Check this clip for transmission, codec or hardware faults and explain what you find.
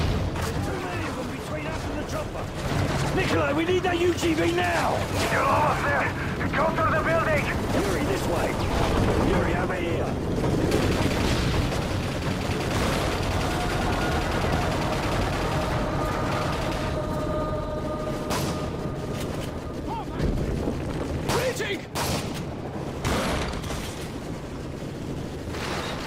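Nothing audible points to a transmission, codec or hardware problem anywhere in the clip.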